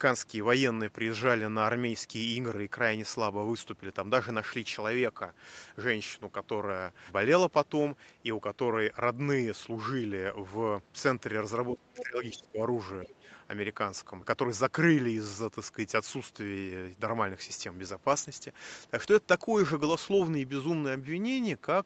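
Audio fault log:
11.73–12.59 s, speech suppressed in double talk: the talker's level sinks by up to about 20 dB over roughly 0.7 s, sounding ducked and dulled. This is likely an echo canceller clamping down while both sides spoke. On the waveform the envelope pinches inward, and on the spectrogram the upper harmonics thin out across the 8 kHz-limited band.
11.98–12.03 s, other side's voice leaking through: a brief scrap of a second voice, about 10 dB under the talker, sits inside the ducked stretch. Residual loudspeaker echo likely escaped cancellation. On the spectrogram it shows as a short, faint, separate harmonic pattern overlapping the main speech.
13.04–13.13 s, speech suppressed in double talk: a shorter dip of about 10 dB lasting roughly 0.1 s, heard as a momentary flattening of the talker. It likely comes from the same suppression action. On the waveform it is a narrow notch in the envelope, and on the spectrogram a brief vertical fading of energy.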